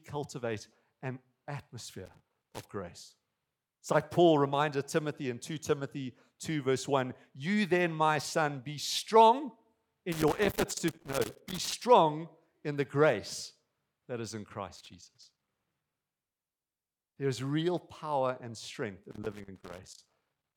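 Loose connector crackle breaks into the speech at 2.06–2.65 s, after "my son be strong" at 10.12–11.73 s, after "grace that is in" at 14.76–15.88 s, and after "real power and strength" at 19.11–20.55 s. A worn contact intermittently cuts the signal, producing irregular scratchy bursts.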